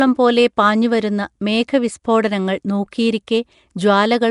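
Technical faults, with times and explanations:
Throughout, Nellymoser compression: speech sounds rough and hissy, smeared and underwater, with nothing above 10.6 kHz; likely from a low-bit-a-sample block codec at 44 kbps, noise-filling weak bands.
2.91 s, pre-echo: a brief hiss creeps in about 13 ms ahead of a sharp attack, softening it, as block-wide quantisation noise spills into the quiet moment before.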